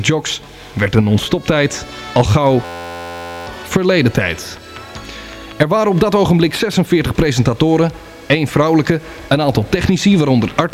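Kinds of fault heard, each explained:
System hang loop: from 2.65 to 3.47 s, the output repeats one 11.6 ms slice, fitting a 512-sample buffer, producing a steady 86 Hz buzz while the system freezes.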